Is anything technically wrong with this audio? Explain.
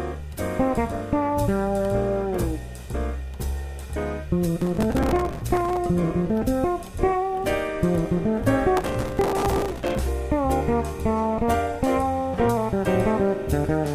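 Yes. Bursts of gritty, tearing crackle ride on the sound from 4.62 to 5.77 s and from 8.77 to 9.99 s. This is processor overload crackle. Dozens of very short buffers, likely around 3 ms each, miss their deadlines, and each gap is filled with a hard-edged scrap of old audio.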